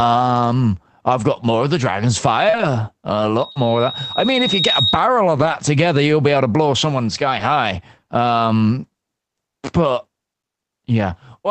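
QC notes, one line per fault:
2.49–2.55 s and 3.51–3.57 s, short concealed packet loss: about 40 ms of audio never arrived, so the decoder extended the preceding sound and crossfaded back. The result is a brief smear or wobble rather than a clean gap or dropout, and a short consonant can disappear.
2.53–2.59 s, 3.55–3.57 s, 5.37–5.55 s, 7.35–7.41 s, lost packet rebuilt from error correction: the decoder played low-bitrate backup copies of the missing audio, so there is no hole. Stretches of 40 ms, 20 ms, 100 ms and 40 ms turn rougher and noisier for a moment. Unlike concealment, the real sound continues rather than being guessed. The longest stretch fits several 20 ms packets in a row.
3.37–5.06 s, loudspeaker feedback squeal: a steady 3.8 kHz tone grows over roughly 1.5 s until it is about as loud as the speech. Its single fixed pitch and gradual swell set it apart from broadband distortion or a brief click. 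It comes from the microphone picking up its own loudspeaker.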